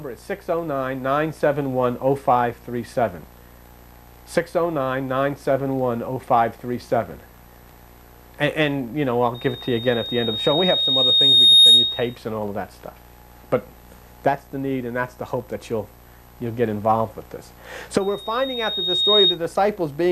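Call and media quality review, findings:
Loudspeaker feedback squeal, 9.34–12.16 s: 3.7 kHz tone swells over about two seconds to roughly 15 dB above the audio. Probable cause is the mic picking up its own loudspeaker, with loop gain above one there. Spectrogram shows a lone bright horizontal line. Waveform envelope balloons.

Recurrence, 18.0–19.39 s: same 3.7 kHz line, faster rise of about a second, peaking roughly 10 dB over the signal. Same acoustic path, loop still closed.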